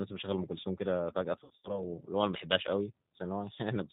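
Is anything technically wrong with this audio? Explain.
Yes, two faults are audible in this speech. Throughout, the G.729 codec at 8 kbit/s rebuilds the voice from a filter and sparse pulses, so it sounds rough and synthetic. A spectrogram shows nothing above 4 kHz. From 1.44 to 1.83 s, VoIP packet loss concealed by the speech codec removes about 140 ms of audio scattered over 200 ms, with the longest gap 80 ms. The decoder stretches the last pitch and filter into a fading buzz or coloured noise, seen as smeared flat harmonics and a sagging, weakened waveform until recovery.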